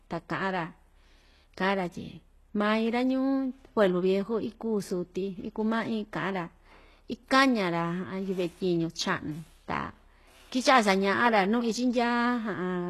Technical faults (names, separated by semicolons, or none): HE-AAC compression